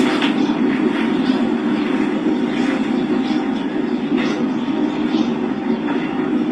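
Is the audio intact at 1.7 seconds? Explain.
No. Transcoding between lossy codecs affects 1.7 s, as it does the whole clip: the sound has likely passed through several lossy encoders in turn, ending in something like Opus. Each stage re-encodes the previous one's artefacts and adds its own, so mixed artefacts pile up, with nothing above 19.3 kHz.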